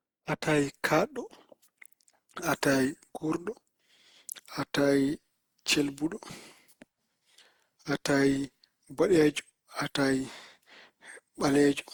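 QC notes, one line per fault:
Throughout, generation loss: the speech has a swirly, smeared, hollow quality, more than a single pass at something like Opus around 64 kbit/s would leave, and consonant attacks come out blurred. It's likely been through the encoder roughly half a dozen times or more. Each re-encode lands on a shifted frame grid and quantises again, so the noise stacks up. Bandwidth holds up, with content reaching 20.2 kHz, so the damage is texture, not top end.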